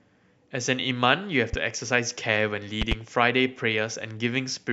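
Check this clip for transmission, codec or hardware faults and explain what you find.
There are two loud pops in this speech. A single one hits at 1.53–1.56 s, and a double one at 2.82–2.94 s, up to roughly 15 dB above the speech. They're likely electrical transients from a plug, switch or static.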